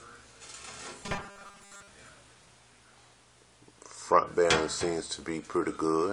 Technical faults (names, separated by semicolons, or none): robotic sound from repeated short buffers